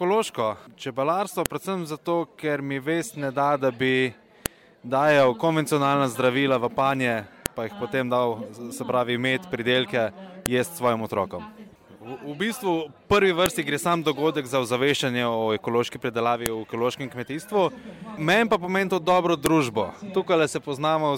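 The audio carries a file header played as audio, a sharp click at 1.46, 4.46, 7.46, 10.46, 13.46, 16.46 and 19.46 s. The regular 3-second spacing shows WAV pieces joined with their header bytes left in, which then play back as samples.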